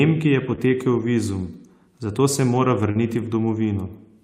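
Lost packet rebuilt from error correction at 0.51 s: one 20 ms packet went missing, and the decoder played the low-bitrate copy carried by the next packet, so there is no gap, just a rougher, noisier stretch.

Short concealed packet loss at 0.55 s: about 20 ms never arrived in time, and the receiver extended the preceding sound before blending back, giving a brief smear or wobble.

Short concealed packet loss at 2.91 s: roughly 40 ms was missing and was filled by continuing the last sound, a longer smear than the first.

Lost packet rebuilt from error correction at 2.95 s: another single 20 ms packet was replaced by its coarse redundant copy, which is audibly grainier.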